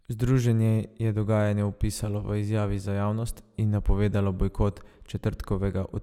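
Nothing in this speech stands out as a technical fault, so there's nothing here to point to.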